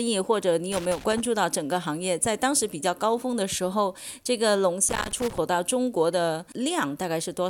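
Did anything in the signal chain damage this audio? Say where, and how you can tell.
Yes, in the analogue wiring. There's loose connector crackle from 0.72 to 1.26 s and again from 4.89 to 5.38 s: irregular bursts of scratchy crackle where a worn contact keeps making and breaking, chopping the signal into fragments.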